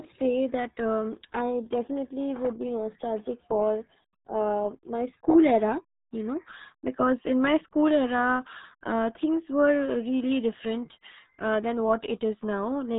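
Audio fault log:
Throughout: RealAudio 14.4 codec. The speech is heavily muffled and gargly, with nothing above about 3.8 kHz, consistent with an 8 kbit/s dial-up speech codec discarding detail. A spectrogram shows a flat ceiling near 3.8 kHz and smeared, blotchy formant bands beneath it.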